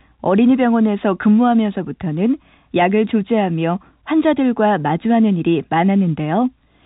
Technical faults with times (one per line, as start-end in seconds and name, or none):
none